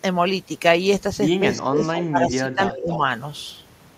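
From 1.57 to 1.86 s, then 2.09 to 2.33, 2.49 to 2.61 and 2.81 to 3.01 s, the speech sags by up to about 20 dB. These are speech suppressed in double talk, likely an echo canceller turning both talkers down, and they appear as hollowed-out notches in the waveform. At 1.95 to 2.02 s and 2.64 to 2.97 s, an echo leak, likely from a loudspeaker pickup, returns a copy 289 ms late and about 10 dB lower. On the spectrogram it shows as fainter, delayed repeats of the speech patterns.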